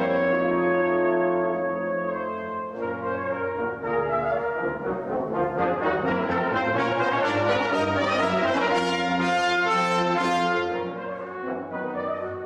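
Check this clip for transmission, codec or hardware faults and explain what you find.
Nothing here points to a transmission, codec or hardware problem; it all sounds fine to me.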